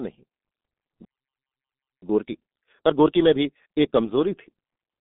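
G.723.1 codec damage runs through the whole speech clip. Nothing reaches above about 3.7 kHz, and the usable band sits roughly between 200 Hz and 3.6 kHz, so the voice is narrow and boxy. The coder rebuilds each 30 ms frame from a coarse, slowly updated model of the vocal tract, and at this level of damage, which fits a rate near 6 kbit/s, the result is muffled and hoarse, with consonants smeared into one another.

A playback stall cuts the sound off at 1.05 s, and silence holds until 2.02 s, a gap of about 0.98 s. The speech breaks mid-flow. The likely cause is the player running dry of buffered data, or its audio thread being held up, so that nothing was sent to the output until the supply resumed.

Time-compressed catch-up follows straight after, from 2.02 s to 3.96 s, with the speech running at 1.5 times normal speed. To work off the backlog built up during the stall, the player drops short slices of audio and cross-fades across the joins, which shortens the material without shifting pitch. 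The voice keeps its normal register but sounds rushed.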